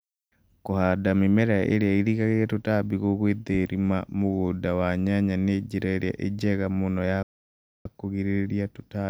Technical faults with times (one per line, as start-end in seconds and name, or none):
7.23-7.86 playback stall